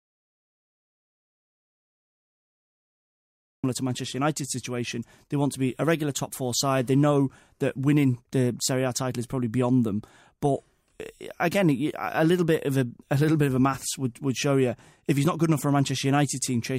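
Speech, and it opens in dead silence: from the first instant until about 3.64 s there is nothing at all, not even room tone, before the talker cuts in abruptly mid-flow. That is an audio dropout to silence, already under way when the clip begins. The likely cause is a lost input, such as a disconnected device, a failed link or an accidental mute, while the recorder kept writing silence, so whatever was said in that stretch is gone.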